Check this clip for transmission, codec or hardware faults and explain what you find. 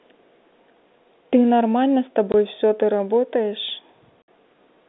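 Two transmission faults are present, both packet loss filled with silence, on a speech signal carried over G.711 telephone coding that limits the band to roughly 200 Hz to 3.6 kHz.

From 2.32 to 2.34 s, and again from 4.22 to 4.28 s, the audio drops to dead silence for 20 ms and then 60 ms. The gap lengths fit a 20 ms packet interval, with one packet missing first and then three consecutive packets. The receiver played silence instead of concealing the loss, so the speech cuts off and resumes abruptly at hard edges.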